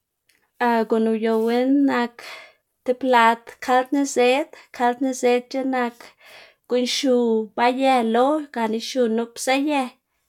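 No technical faults can be heard anywhere in the recording, which is speech.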